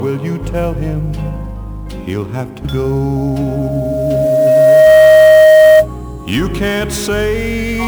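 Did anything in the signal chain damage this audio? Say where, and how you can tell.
Yes. The converter stage shows sample clock jitter through the whole clip. A fine hiss and roughness rides on the sound. It grows on loud and bright passages. That tracking points to timing error, not steady noise. An unstable clock samples slightly early or late, and the error scales with waveform slope. The timing spread sounds like around 10 microseconds rms, leaving error roughly 25 dB below the signal.

A loudspeaker feedback squeal occurs in the analogue acoustic path between loudspeaker and microphone. From 3.16 s to 5.88 s a single 625 Hz tone appears. It swells for about two seconds and ends up far louder than the programme, roughly 15 dB above it. One pitch that feeds on itself is the mark of a closed loop. At that frequency the loop gain exceeds one until the loop is broken.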